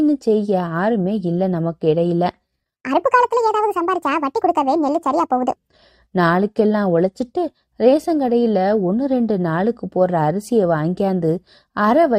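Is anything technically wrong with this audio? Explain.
Yes. From 2.76 s to 5.56 s there is a section at the wrong speed: the speech plays back at 1.58 times its recorded rate, so it runs hurried and the voice jumps up by roughly seven semitones before snapping back to normal at the end. Because pitch and tempo shift together, this is likely a playback or editing step that read this segment against the wrong clock rather than a deliberate pitch effect.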